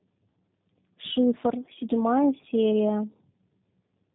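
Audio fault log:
Throughout, tandem speech coding: the speech is rough, muffled and warbly, with nothing above 3.8 kHz. Two low-rate coding passes in a row point to G.729A at each end, which fits a G.711 link in between, with each coder re-coding the other's artefacts.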